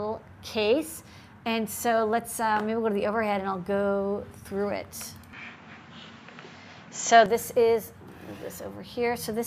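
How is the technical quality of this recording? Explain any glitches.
One glitch affects the recording. From 5.33 to 7.26 s, likely an input switched to a poorer device, the sound turns duller with no gap, shifting about 5 dB in level over a faint new noise floor. On a spectrogram the band above 7.6 kHz goes empty, and the waveform's envelope steps abruptly at both switches.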